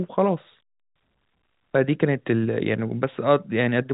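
No technical faults can be heard in this speech recording. It carries the sound of G.711 telephone coding, with nothing above 3.8 kHz and at most faint coding damage.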